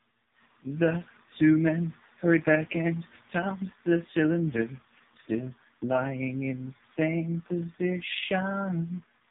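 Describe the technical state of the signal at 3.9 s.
At 3.9 s the speech sounds buzzy, thin and markedly synthetic, with a hollow, phone-line quality and nothing audible above about 3.8 kHz. This is the AMR narrowband mobile codec, present throughout the clip. It rebuilds speech from a vocal-tract model excited by a handful of pulses per 5 ms subframe, so detail is lost. Damage this heavy fits its lowest mode, around 4.75 kbps.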